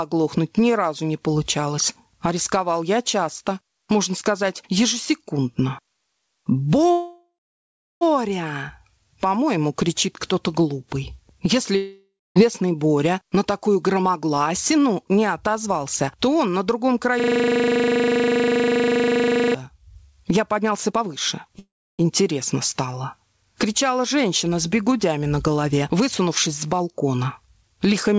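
Gain pumping runs through the whole recording, with a gain swing of around 25 dB, likely from input gain set far too high and a fast limiter clamping every peak, which leaves loud and soft parts squashed together. At 6.92 s to 8.03 s and again at 21.59 s to 22.01 s there is a call audio freeze. The last sound trails off as a fading buzz, then silence for about 0.72 s and 0.31 s respectively. Audio then resumes exactly where it stopped, adding about 1.1 s and 0.4 s of delay with nothing lost, likely because packets stalled and the jitter buffer ran dry. A long network dropout at 11.76 s to 12.38 s follows the same fade-to-silence pattern, with about 0.26 s of silence, but here roughly 0.6 s of audio never returns, likely from packets lost outright. Jitter buffer speed-up shows at 13.35 s to 16.47 s (107%), 20.56 s to 21.54 s (123%) and 25.63 s to 27.94 s (107%). Each time, roughly 0.2 s is trimmed away in tiny pitch-period slices, so the sound hurries along at unchanged pitch. 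From 17.20 s to 19.54 s a system hang loop repeats one 40 ms fragment at 25 Hz, around sixty times, producing a steady buzz at the loop rate while the ring buffer cycles unattended. Nothing is heard above 8 kHz, consistent with the G.722 call codec.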